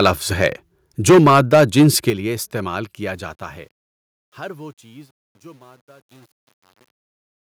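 This speech clip opens with microphone overload, likely from an input volume set too high, so the converter's limit flattens the loudest peaks and adds a harsh crackle at 0.0 to 0.1 s (about 6 dB over), 0.42 to 0.47 s (about 3 dB over), and most heavily from 1.08 to 2.1 s (about 9 dB over, with roughly a tenth of the waveform clipped). The call software then apparently stepped the microphone volume down twice. Both speech and background drop abruptly by about 2 dB at 1.1 s and by about 7 dB at 2.1 s, just before "لیے استعمال", each landing in the middle of the distorted stretch or right at its end. The fade-out that follows "لیے استعمال" runs from about 3.0 s to 7.51 s, but a digital gain stage without dither gives it truncation distortion. The resolution fits about 9 bits, so as the level sinks the waveform collapses into coarse steps, and from about 4.0 s to the end the quiet tail turns gritty. 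At 6.03 s the microphone volume is stepped up by 6 dB, and the fading sound jumps louder at once in the middle of that decaying tail.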